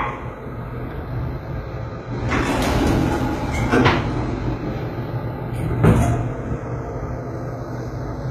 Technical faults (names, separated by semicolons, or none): channels drifting apart; HE-AAC compression